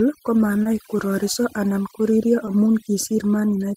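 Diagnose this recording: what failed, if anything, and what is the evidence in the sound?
Call processing: overdone noise removal throughout. The background drops and breaks up into twinkling specks. Quiet speech bands are cut along with the noise.

Network: short concealed packet loss at 0.63–0.67 s, before "kororiso anan koririo amu", and 2.45–2.49 s, after "kororiso anan koririo". The decoder synthesised about 20 ms to cover each gap, heard as a brief smear.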